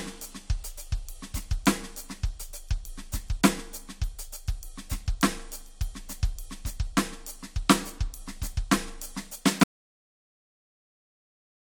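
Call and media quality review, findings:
Audio dropout to silence, music, 9.63 s to end (about 2.0 s). Sound cuts mid-flow to silence, no room tone. Likely input loss (disconnected device, failed link or mute) while writer kept recording. Waveform: flat line; spectrogram: blank to clip end.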